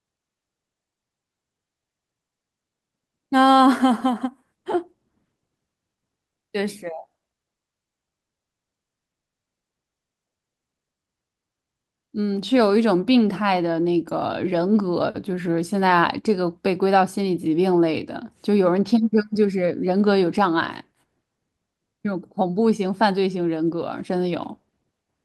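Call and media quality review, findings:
No audible faults found in this speech recording.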